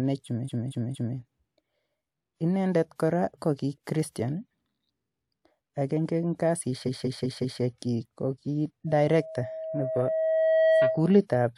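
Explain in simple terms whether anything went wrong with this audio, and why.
Twice the recording stutters because of repeated frames. A short chunk of compressed audio was stored or sent more than once, so the player plays the same slice again. From 0.44 to 1.14 s, a piece about 232 ms long plays three extra times. From 6.85 to 7.60 s, just after "agenge eng" and before "ko ki", a 186 ms piece plays four extra times. Each repeat adds a small jump, and the two together make the clip about 1.4 s longer.

From 8.87 to 11.22 s, right after "ko ki", there is a loudspeaker feedback squeal. A microphone was picking up the speaker it was feeding, and at one pitch that loop kept amplifying itself. The result is a steady tone at 640 Hz that grows over roughly two seconds into a howl louder than the speech.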